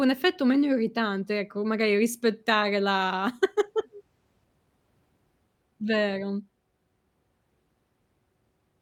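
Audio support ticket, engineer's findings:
Listened through the speech recording: no faults found, nothing to attribute to any component, no action required.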